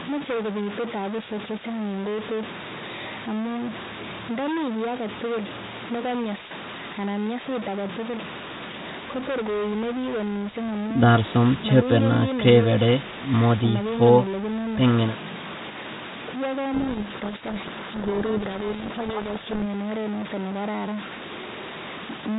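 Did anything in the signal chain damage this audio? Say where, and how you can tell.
Yes. At the converter or its wiring, one data bit is likely stuck at a fixed value for the whole clip. About half the samples are off by that bit's weight, which adds grainy noise or harsh, buzzy distortion to the speech, depending on which bit it is. Pauses fill with noise because the bit flips with the sign of small values.

At the G.726 codec stage, from 16.74 to 19.63 s, the decoder reads the code words with their bit order swapped relative to the sender. That is a codec payload misread: the decoder rebuilds the wrong differences, burying the speech in harsh distortion until both ends agree again.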